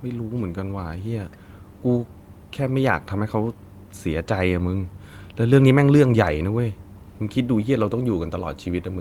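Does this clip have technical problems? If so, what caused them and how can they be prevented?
No, nothing in this speech recording stood out as a technical problem on listening, so there is nothing here that calls for prevention.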